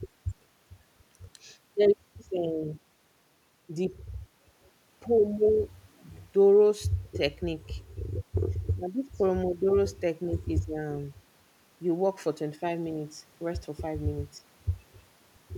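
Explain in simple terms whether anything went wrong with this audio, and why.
Nothing went wrong with this speech recording; no technical faults can be heard anywhere in it. The sound carries on steadily with no breaks, glitches or interruptions to point to.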